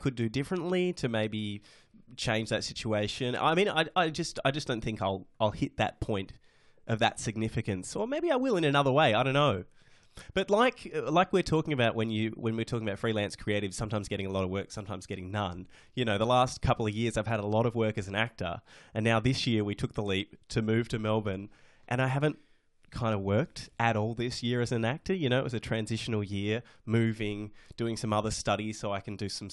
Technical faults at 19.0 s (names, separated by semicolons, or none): none